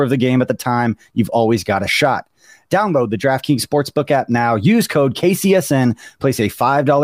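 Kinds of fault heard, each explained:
No faults detected in this speech recording.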